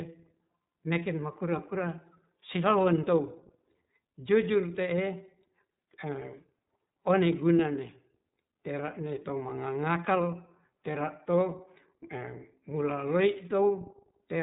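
From start to finish the speech carries plainly audible iLBC codec damage: everything above 3.8 kHz is gone, and each 30 ms frame's excitation is coded on its own, leaving a rough, slightly synthetic edge that fits the 13.33 kbps iLBC mode.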